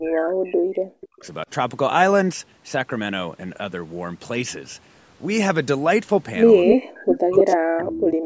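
From 0 to 1.25 s the speech drops in and out, dipping by roughly 40 dB: speech suppressed in double talk, likely an echo canceller turning down both sides at once. At 6.67–6.75 s an echo leak begins: a copy of the speech delayed by 287 ms and about as loud as the speech itself, likely residue a speakerphone's canceller failed to remove. The double-talk suppression returns from 6.74 to 8.18 s, with further echo scraps at 7.12–7.16, 7.37–7.54 and 7.87–7.97 s, fading from near speech level to faint.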